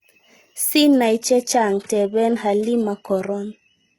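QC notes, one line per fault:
1.03 s to the end: adaptive stream at a lower bitrate. The connection slowed and playback switched to a cheaper encoding, which fits a move from roughly 96 kbit/s AAC-LC to roughly 16 kbit/s HE-AAC. The treble is abruptly duller and codec artefacts thicken, with no gap in the audio. On a spectrogram, content above 11.8 kHz vanishes in a hard horizontal edge at 1.03 s. The waveform shows no dropout at the switch.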